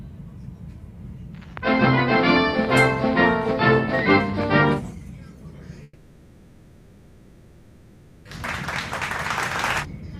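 At 5.83 s the audio stops and the last sound smears into a fading buzz or hiss. The gap lasts until 8.29 s, and about 2.4 s of sound is gone. Playback then resumes further on. This is a long network dropout, likely from packets lost in transit.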